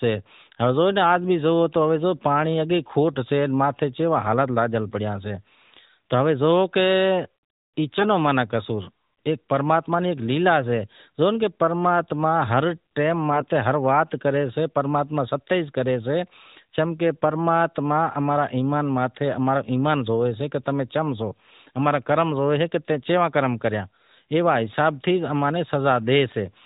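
At 7.96 to 8.07 s and again at 13.32 to 13.53 s, AMR bit errors appear. Corrupted bits in the mobile frames misplace the excitation pulses. Pitch and level hold, but the sound turns hoarse and gargly. The second burst is longer and rougher.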